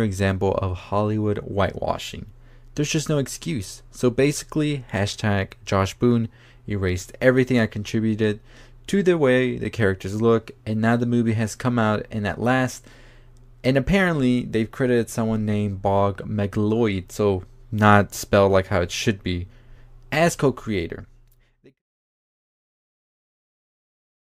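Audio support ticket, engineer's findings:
No faults found; smooth fade-out ends near 21.8 s.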